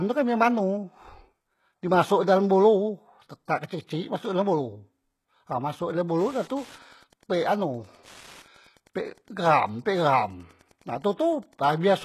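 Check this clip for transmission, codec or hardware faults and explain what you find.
Two faults are present: codec damage across the whole recording, and radio interference in the second half.

HE-AAC compression, throughout: the speech was likely encoded with HE-AAC at a low bitrate, around 16 kbps, which points to the v2 variant. Only the lower spectrum is truly coded. The treble is synthesised by copying lower bands upward under a coarse envelope, so its harmonics don't line up with the real ones. The damage is heavy: sibilants sound gritty and metallic, and nothing is present above 12.3 kHz.

Wi-Fi interference, from 5.87 s to 11.97 s: a nearby Wi-Fi radio's beacon, transmitted every 102.4 ms, is being picked up and rectified by the audio circuitry, so it lands in the signal as a demodulated pulse train. It is heard as a steady ticking about ten times a second, sitting around 30 dB below the speech and continuing to almost the end of the recording.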